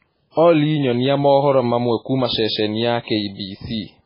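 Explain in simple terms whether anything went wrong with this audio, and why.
Throughout, the speech sounds dull and watery, with nothing above about 5.3 kHz, likely from heavy MP3 compression. Unlike simple muffling, it also swirls. At 0.31 to 0.37 s and 3.02 to 3.08 s there is pre-echo: a hiss about 58 ms long comes before sharp sounds, not after them as an echo would.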